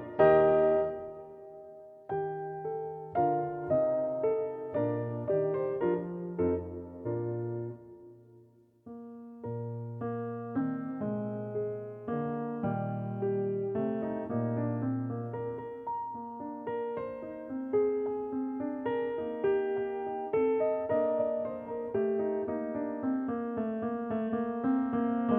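At 10.57 to 10.59 s, 21.67 to 21.71 s and 24.27 s the audio has compressed frames skipped: whole coded frames never reach the output, so the sound jumps forward. The first jump loses about 100 ms, roughly two frames, and the later two about 50 ms each, a single frame, which points to a frame length near 46 ms.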